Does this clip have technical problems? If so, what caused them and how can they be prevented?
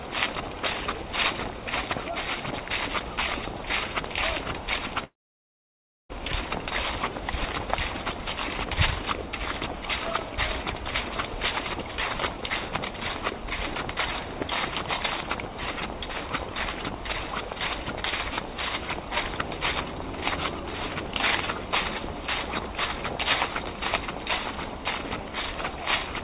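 Yes. From 5.04 s to 6.11 s the sounds break off: a brief fading tail carries the last sound on, then about a second of silence follows before audio resumes with roughly a second of material simply missing. This is a long network dropout, likely caused by packets arriving late or not at all while the receiver's concealment ran out. On a waveform it shows as a short decaying smear, then a flat line; a spectrogram shows a blank column. Keeping the network link stable and giving the jitter buffer more headroom would prevent it.

Between 13.78 s and 16.79 s there are small regular ticks every 0.5 s, about seven in all, each from roughly a millisecond of audio replaced by silence. These are periodic USB or driver dropouts, where a recurring background task stalls the audio interface. A waveform shows tiny evenly spaced notches; a spectrogram shows thin vertical broadband lines at equal intervals. 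Disabling the offending background process or using a larger audio buffer would prevent them. The call path's cut-off at 4 kHz appears as an empty band above that line on the spectrogram.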